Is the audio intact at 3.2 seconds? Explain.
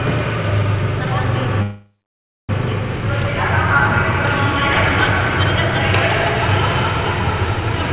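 Yes, the audio is intact at 3.2 seconds; it has simply passed through a narrowband call path that leaves nothing above 4 kHz, which fits G.711 A-law at 64 kbps.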